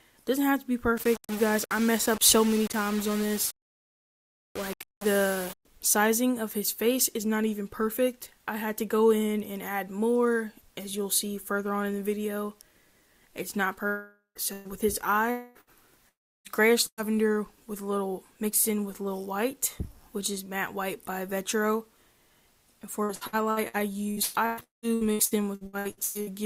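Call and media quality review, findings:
Low bit depth without dither, 0.97 to 5.65 s. Grainy distortion that tracks the signal. Quiet parts turn gritty. Error sits about 15 dB below the signal, which fits rounding to around 5 bits. Likely cause: requantisation stage with no dither.

Long network dropout at 13.87 to 14.38 s, 15.31 to 15.58 s and 16.09 to 16.48 s. Receiver extends the last sound as a fading buzz or hiss, then drops to silence near the end of the first and third. Likely cause: about 0.48, 0.24 and 0.36 s of audio never arriving.

Burst of packet loss at 14.53 to 14.68 s, 15.61 to 15.70 s and 16.87 to 17.01 s. Short held buzz or fading hiss, then a jump ahead. About 120, 60 and 120 ms missing. The last burst ends in brief silence. Jitter buffer concealment.

Repeated packet loss (robotic sound), 23.04 to 26.30 s. Choppy texture. Nineteen holes, the longest 190 ms, each patched by extending the previous sound. 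About 42% of the stretch is concealed rather than real audio. Sustained network loss.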